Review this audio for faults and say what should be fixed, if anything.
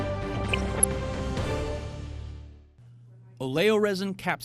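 Throughout, the sound is dull and gurgling, with a granular grit as upper sub-bands drop out and flicker. The likely cause is MP2 compression starved of bits, consistent with a rate near 80 kbps. Prevent it by encoding at a higher bitrate or with a more efficient codec.

From 0.32 to 0.84 s, short blips of noise and level jumps appear in single sub-bands. This is DAB burbling: bit errors at around one percent slip past error correction, corrupting sub-band samples and scale factors so single bands jump in level. Prevent it with better reception, such as a stronger antenna position, or a more robust error-protection level.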